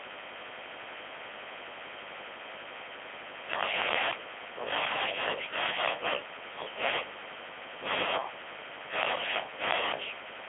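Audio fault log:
Throughout, Codec 2 vocoder: the speech comes out robotic and buzzy, because the decoder rebuilds the voice from sine waves driven by pitch, voicing, energy and a rough spectral envelope rather than keeping the waveform. The damage is heavy, though the relative detail points to the codec's top rate, around 3.2 kbit/s. It's squeezed into a phone-style 300 Hz to 3.4 kHz band, with nothing at all above 3.6 kHz, so it sounds thin and dull too.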